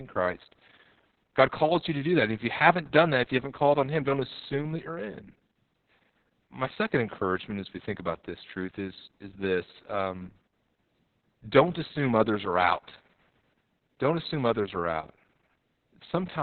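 From start to finish this speech carries heavy Opus voice compression damage. The top end stops dead at about 4.3 kHz, so it's squeezed into a narrowband, telephone-like range and sounds muffled. The low bitrate also leaves the excitation coded coarsely, which gives the voice a hoarse, slightly robotic grain. That combination points to SILK running at something like 6 kbps with long 60 ms frames.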